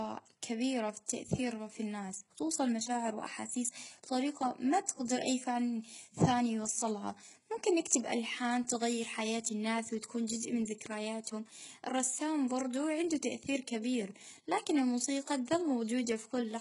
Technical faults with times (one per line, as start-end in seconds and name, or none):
0.00-16.61 HE-AAC compression